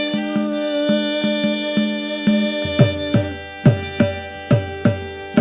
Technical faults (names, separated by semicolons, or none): none